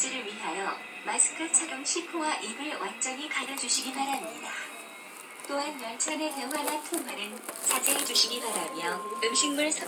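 Loudspeaker feedback squeal runs from 7.74 s to 9.56 s in this recording of sounds. A single 1 kHz tone rises out of the background over about a second and a half and ends up a few decibels louder than the sounds themselves. The microphone is picking up a loudspeaker that it also feeds, and around 1 kHz the loop returns more than it receives, so that frequency keeps growing on its own into a steady squeal.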